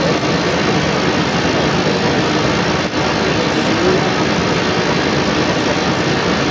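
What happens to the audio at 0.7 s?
A second voice, the other side's voice leaking through, runs from 0 to 6.5 s, slightly louder than the talker; unlike a bystander, it's likely far-end loudspeaker sound the echo canceller missed.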